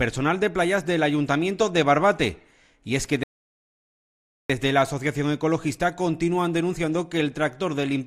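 At 3.23 s there's a rebuffering stall: the player ran dry, went silent until 4.50 s, then picked up exactly where it left off, adding about 1.26 s.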